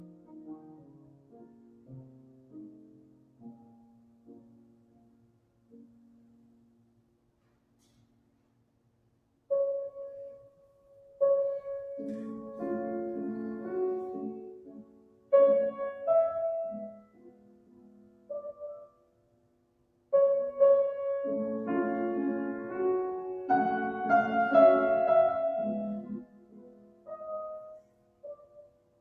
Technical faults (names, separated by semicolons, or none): noise suppressor applied to music or sounds; sound cut by the noise suppressor